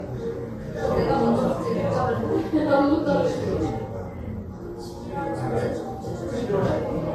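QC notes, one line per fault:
Throughout: transcoding between lossy codecs. Nothing above 13.1 kHz, leaving the top end dull and closed in. Two layers of coding damage sit on top of each other, their different artefacts heard together. This is likely an MP3 encode at a low rate, around 50 kbit/s, then re-encoded to Vorbis near 42 kbit/s. The second codec wasted bits re-coding the first one's artefacts while adding its own, and kept the lower cut-off.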